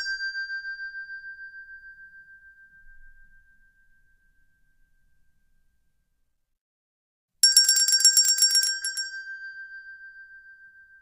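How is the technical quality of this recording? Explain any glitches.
Nothing glitchy turns up anywhere in these sounds, so there's really nothing here to flag or explain.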